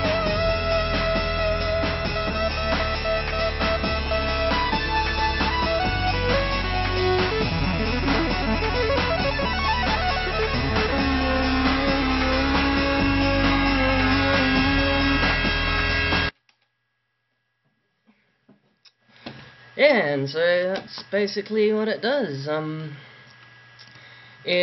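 No technical faults can be heard anywhere in this recording. Nothing at any point in the audio calls for a timestamp or a cause.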